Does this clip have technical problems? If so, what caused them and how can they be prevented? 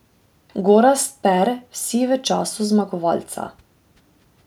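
No, the speech signal shows no technical faults that can be heard, so there is nothing to trace back to a cause or to prevent.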